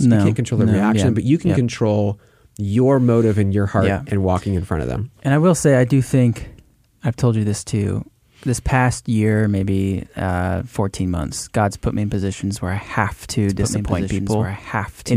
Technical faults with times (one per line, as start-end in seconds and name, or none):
13.49-15.16 doubled audio track